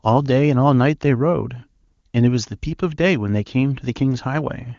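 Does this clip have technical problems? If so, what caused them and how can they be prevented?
No, this speech clip has no technical problems to trace or prevent. It has the full, clear character of the AMR wideband (HD Voice) codec at its top rate, which fits a bitrate of about 23.85 kbit/s, and any coding damage is at most faint.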